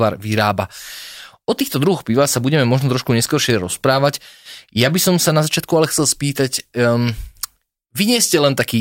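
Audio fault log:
No faults can be heard in this speech recording. Nothing in the audio calls for an entry in the log.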